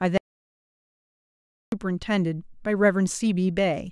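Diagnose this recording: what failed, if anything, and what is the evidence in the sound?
Audio dropout to silence from 0.18 s to 1.72 s: the speech cuts out abruptly and about 1.55 s of silence follows, with no room tone, before the speech resumes mid-flow. The input path likely failed, and the recorder kept writing silence.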